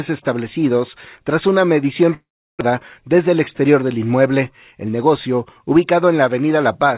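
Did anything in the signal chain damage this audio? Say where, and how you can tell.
Yes. Network: from 2.14 to 2.63 s the sound fades into a buzz or hiss, then silence, and resumes with about 400 ms lost. This is likely a long network dropout, not a brief concealed packet loss.

Jitter buffer: from 3.28 to 3.76 s the audio runs 8% fast at unchanged pitch, shedding roughly 50 ms. This is a jitter buffer speed-up, not resampling, which would raise the pitch.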